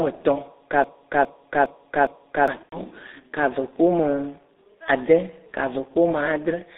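G.723.1 codec damage runs through the whole clip. The speech is band-limited to roughly 250 Hz to 3.7 kHz, which removes the low body and the upper presence, so it sounds muffled and boxy. The coder models the voice in coarse 30 ms steps and quantises that model heavily, which fits a rate near 6.3 kbit/s. The result is a hoarse, grainy texture, and consonants smear into one another.

A broken-record loop runs from 0.84 to 2.48 s. A fragment about 409 ms long plays four times back to back, each pass identical, so the speech stutters in place instead of moving forward. The likely cause is a stall in the player, encoder or stream, which kept resending the last chunk it held. Whatever should have been heard during those 1.6 seconds is gone.

VoIP packet loss concealed by the speech codec occurs from 2.63 to 2.77 s. About 90 ms of audio went missing, which fits three lost 30 ms frames. The decoder filled the gap by extending its last pitch and spectral shape at a falling level. 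This produces a short stretched smear that fades and then mutes on the third lost frame, and the voice stays weak or distorted just after normal packets resume.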